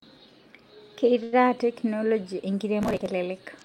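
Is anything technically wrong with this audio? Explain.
Yes, there are two faults in this speech clip.

From 1.23 to 1.35 s there is a short stall from a late packet: the jitter buffer ran dry, so the last sound is stretched for about 91 ms. Unlike a dropout, nothing is lost; the speech resumes where it stopped, just later.

From 2.82 to 3.07 s there is processor overload crackle. Dozens of buffers of about 5 ms each were skipped, leaving rapid hard-edged gaps. This is heard as gritty tearing rather than one clean hold.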